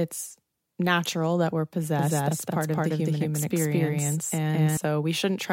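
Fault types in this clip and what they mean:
Doubled audio track: from 1.99 s, after "natural that we're", to 4.77 s, an equally loud copy trails about 200 ms behind, likely from a slower second path.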